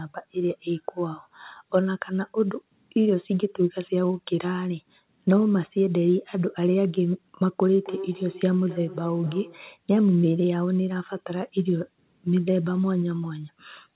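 A speech clip. From 7.74 to 9.72 s there is feedback echo between two devices. The sound returns roughly every 300 ms, at about 14 dB below the speech, as one device replays the other's microphone. The audio stops at 4 kHz, which fits a narrowband G.711 call path.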